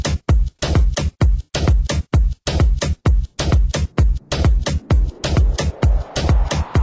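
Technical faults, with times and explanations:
Nothing stood out on listening to the recording.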